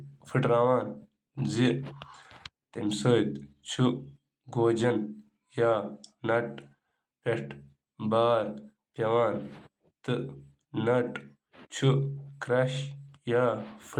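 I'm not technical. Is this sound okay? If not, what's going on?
Yes, no faults: the speech has been through Opus voice compression, which here keeps the full range of high frequencies and leaves only light coding traces.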